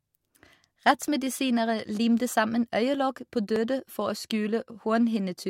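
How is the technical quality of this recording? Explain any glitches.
The speech has two brief skips where sound goes missing between chunks, at 1.08 s and at 3.56 s, the second between "limte sammen øyelokk på" and "for å". Each jumps ahead by about 20 ms, and their 2.5 s spacing points to a recorder likely losing a sliver while switching chunks. Unlike a dropout, no silence fills the gap; the two sides meet directly.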